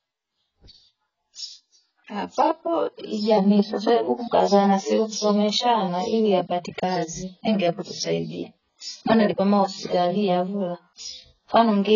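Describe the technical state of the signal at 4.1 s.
Heavy AAC compression, likely starved at around 12 kbps, cuts everything above 7 kHz here as throughout the clip, leaving the speech dull, smeared and warbly.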